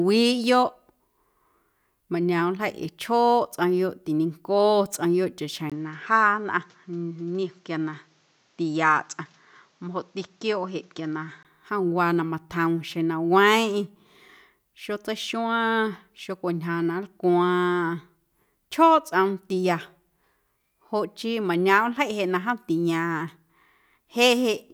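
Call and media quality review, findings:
5.70–11.45 s: speech turns dull, nothing above 7.8 kHz, faint new noise floor, level unchanged; 20 ms silence at the switch. Likely input switched to a poorer device with a narrower-band capture path. Clears again at 11.45 s.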